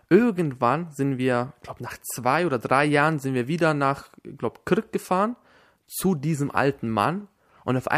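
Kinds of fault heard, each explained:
No dropouts, clicks, distortion or timing faults are audible anywhere in the speech.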